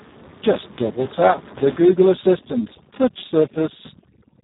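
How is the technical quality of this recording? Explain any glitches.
Technical quality is poor. A heavy codec fault runs through the whole speech clip, and overprocessed noise reduction is added from 1.8 s on.

Speex codec damage is present from start to finish. This CELP speech codec has very few bits here for the excitation signal, the part that carries the fine detail of the voice, so the voice comes out hoarse, buzzy and somewhat robotic. The degradation points to a very low setting, around 4 kbps. Nothing survives above 3.8 kHz. On a spectrogram the content stops at a hard ceiling near 3.8 kHz, and the harmonics below it look smeared and grainy.

Overdone noise removal starts at 1.81 s and lasts to the end. The room noise sits about 19 dB below the speech. Up to 1.81 s it is audible as a steady background bed, and from that point the noise reduction suppresses it heavily. Any frequency band close to the noise estimate gets pulled down hard, and quiet parts of the voice are lost along with the noise. 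The background drops to near silence with twinkling specks. A spectrogram shows scattered isolated dots between words and ragged, gappy voice harmonics. In the waveform, the pauses flatten almost to zero.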